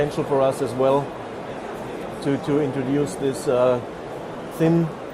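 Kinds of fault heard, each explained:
Adaptive stream starting at a low bitrate: the opening, up to 3.73 s, sounds like an Opus stream at about 32 kbit/s, with dull, partly synthetic treble and stronger codec artefacts. It then switches abruptly and without a gap to a cleaner version, consistent with 64 kbit/s.
Processor overload crackle: from 4.34 s to 4.54 s the audio breaks into a gritty burst of crackle as the processor misses a run of buffer deadlines. Each missed buffer is skipped, and the pattern fits roughly ten misses of about 10 ms buffers.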